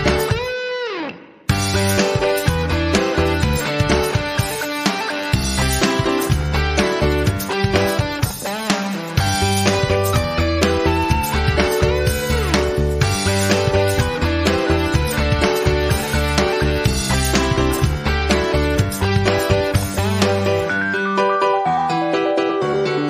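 Nothing is technically wrong with this audio.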